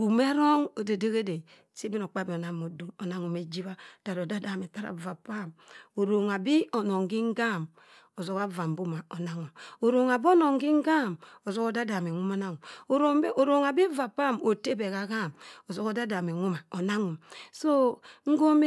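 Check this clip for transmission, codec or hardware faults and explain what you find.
Nothing turned up on a careful listen through this speech recording, so there's simply no fault to report anywhere in it.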